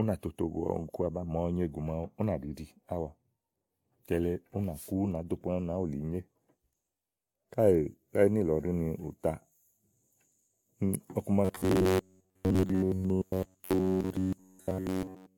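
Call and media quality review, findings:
Swirly, hollow, smeared speech with soft attacks the whole way through, nothing above 17.1 kHz. Looks like generation loss, likely AAC re-encoded several times (around four passes). Each pass requantises on a shifted frame grid, so the noise and spectral holes stack up.

From 11.45 s to 15.37 s, the speech turns into a rigid metallic buzz at 93.8 Hz. That's robotic sound from repeated short buffers, likely a starved playout path re-looping a buffer of about 10.7 ms. Most of that stretch is repeats rather than fresh audio.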